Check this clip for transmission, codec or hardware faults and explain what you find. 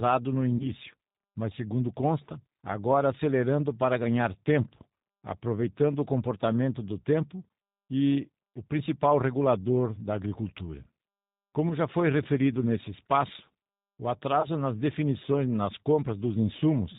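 Two faults are present: the speech has been through a low-rate G.729 codec for its whole length, and there are three short dropouts that the decoder has patched over.

G.729 codec, throughout the clip. The speech is carried by a synthetic model rather than the waveform itself: a vocal tract filter, a pitch predictor and a sparse set of pulses rebuild each short frame, which fits an 8 kbit/s G.729A stream. The damage is plainly audible. Nothing above 4 kHz survives, so sibilants are dull, and voiced sounds come out slightly rough and artificial.

VoIP packet loss concealed by the speech codec, at 0.57 to 0.70 s, 11.69 to 11.73 s just before "já foi referido nesse", and 14.41 to 14.48 s between "referido nesse espaço o" and "nas definições nas". The missing stretches point to about 30 ms, 10 ms and 20 ms of lost audio. The decoder filled each gap by stretching its last pitch and filter settings while lowering the gain, which leaves a brief, fading smear of buzzy tone or coloured noise. 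Because each frame builds on the previous one, the speech stays weakened for a moment after the audio resumes.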